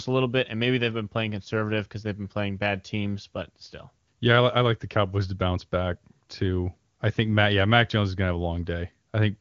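No technical faults can be heard in this speech clip. It carries the sound of the AMR wideband (HD Voice) codec at about 23.85 kbit/s, and its mark on the audio is faint at most.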